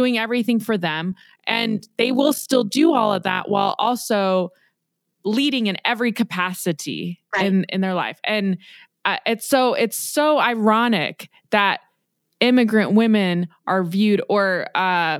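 From 1.12 s to 3.88 s the speech carries overlap-add ripple: frames were rejoined with an overlap that fails to sum to constant gain, so level dips by about 11 dB once per frame, giving a rough flutter at around 50 Hz.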